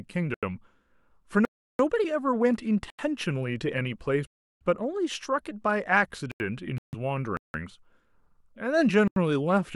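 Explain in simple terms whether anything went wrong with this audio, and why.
Several things went wrong in this speech. Most are blocks of digital silence. The sound drops to total silence, then snaps back with no fade. It happens seven times: at 0.34, 1.45, 2.90, 4.27, 6.32, 7.37 and 9.08 s. Most gaps last about 85 ms and sound like a short hole. The ones at 1.45 and 4.27 s last 341 ms, and the one at 7.37 s lasts 171 ms. These are clear holes. The lengths are exact multiples of one another, which fits an output buffer of 4,096 samples. The program likely did not fill that buffer in time, so zeros went out instead.

There is also a separate gap from 6.78 to 6.95 s, about 148 ms of silence. Its length does not match the buffer pattern. It sounds like a Bluetooth stall, and that is the likely cause. Radio interference delayed the wireless data. The headphones ran out of sound and paused. 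Playback then resumed once the missing data arrived.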